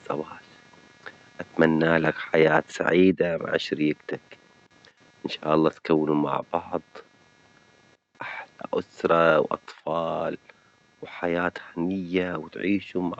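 Throughout the speech a faint buzz of computer activity noise pulses at roughly 200 Hz, far below the voice. It follows processor or peripheral load coupling into the audio ground, not the speech itself.

From 1.61 to 1.65 s a loud syllable crackles harshly. This is microphone overload, with peaks pushed about 2 dB past the converter's limit, likely from excessive input gain.

At 3.12 s voice and background drop abruptly by about 3 dB together. The microphone volume was stepped down, likely by call software reacting to the preceding clipped peak.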